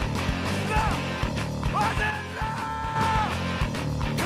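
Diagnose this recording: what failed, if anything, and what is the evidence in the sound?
Skip ahead, at the network and jitter-buffer stage. At 0.81 to 0.83 s the audio jumps forward with no gap and no fill, and roughly 0.7 s of material never plays. The two sides of the cut meet almost directly, so the sound changes abruptly. The playback delay shrinks by the same amount. This points to a block of audio being discarded, either in transit or when an overflowing jitter buffer dropped queued audio to catch up.

One channel drops out from 2.10 to 2.96 s. Over that stretch the level falls abruptly by about 6 dB and recovers at the end. That drop is what the mono sum does when one of its two inputs goes silent: the common content loses half its contribution. The likely cause is an intermittent stereo channel upstream of the downmix, such as a wiring or connector fault.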